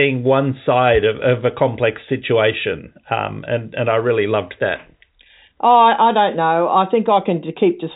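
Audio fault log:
No faults heard in this telephone-band speech recording.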